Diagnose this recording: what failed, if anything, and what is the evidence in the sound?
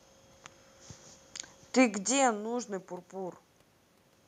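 Nothing in the signal chain stood out on listening; the background noise belongs to the room, and the shift in level at around 2 s is the talker moving relative to the microphone.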